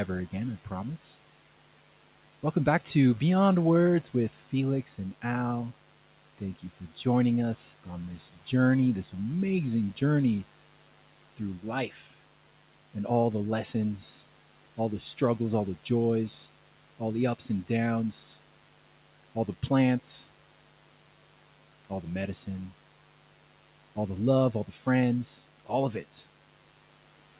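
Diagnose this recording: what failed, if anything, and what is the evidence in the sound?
In the analogue wiring, a dimmer, rectifier or poorly shielded lead is injecting switching spikes twice per 50 Hz cycle. The result is a steady, raspy mains buzz through the whole recording, sitting roughly 20 dB below the speech, with harmonics stacked well up the spectrum.

At the call-processing stage, the noise suppressor misjudged part of the speech as noise. From 11.9 to 12.02 s it pulled the speech down by about 8 dB for roughly a tenth of a second, so that moment sounds briefly swallowed and faint against the room noise.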